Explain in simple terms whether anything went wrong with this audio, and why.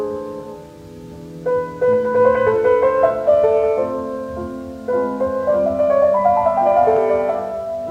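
Nothing went wrong with this recording. There are no dropouts, glitches or other technical faults anywhere in it.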